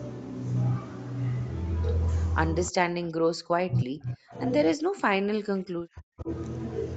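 From 2.53 to 4.39 s and again from 4.76 to 6.29 s, the speech sinks and breaks into fragments, likely speech suppressed in double talk: with both sides talking, the echo canceller mistook this talker for loudspeaker echo and attenuated it, by up to around 40 dB, for roughly a second and a half each time. On a waveform the envelope collapses in patches; on a spectrogram the harmonics fade to near-empty gaps beneath the 8 kHz ceiling of the call path.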